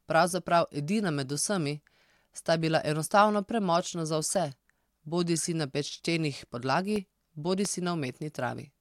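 In this speech recording, the audio path three times likely failed to fill its output buffer in time, so short blocks of digital silence replaced the sound at 3.09 s (2.9 ms, which fits a 128-sample buffer), 4.35 s (about 1 ms) and 6.96 s (about 1.2 ms). Each gap drops abruptly to silence and back, heard as a brief tick. From 7.65 to 7.67 s a sudden voltage pulse, likely from a switch, static discharge or driver glitch, adds a single loud pop about 10 dB above the speech, which continues underneath.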